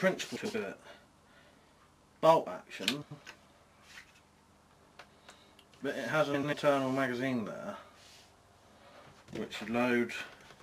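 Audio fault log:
0.35–0.55 s, 3.02–3.21 s, 6.34–6.54 s: frames out of order. Two adjacent 93 ms blocks play swapped, so each stretch flutters garbled. No time is lost.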